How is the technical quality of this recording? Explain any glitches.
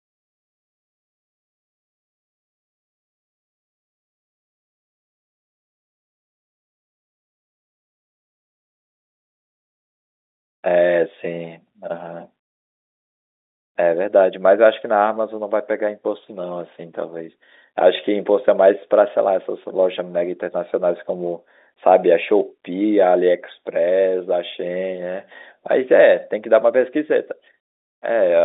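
Nothing stood out on listening to this speech recording.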